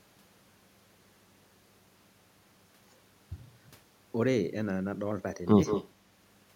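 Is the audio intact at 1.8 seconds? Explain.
No. Mains hum runs through the whole speech clip, so it is present at 1.8 s: a steady 50 Hz tone with low harmonics, quite faint beneath the speech, leaked in through a ground loop or nearby transformer. Its fixed pitch and unchanging level separate it from rumble or broadband noise.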